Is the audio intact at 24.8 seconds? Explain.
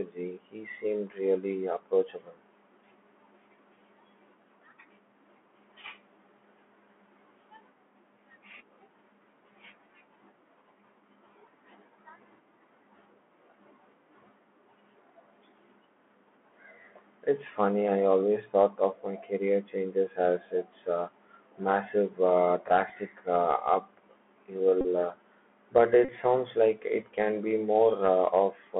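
No. From 24.81 to 24.85 s there's a Bluetooth headset packet repeat. The link dropped voice packets, and the chip just decoded the last good packet's bits over and over to fill the gap. About 34 ms went missing, which fits roughly nine 3.75 ms packets in a row. Looping every 3.75 ms gives a short, steady buzz near 267 Hz in place of the real sound, and it stops once good packets come back.

That moment also carries the Bluetooth CVSD headset codec that runs through the whole clip. CVSD codes the speech as a single up-or-down bit per sample at 64 kHz with an adapting step size, and here the line band is squeezed to 200 Hz–3.4 kHz. The damage is plainly audible: thin, boxy speech, scratchy s sounds, distortion where loud high content outruns the step, and a grainy hiss underneath.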